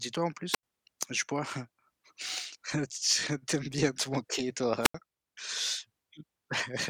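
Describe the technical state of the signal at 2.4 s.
At 2.4 s the speech signal is intact, with no audible fault at that moment.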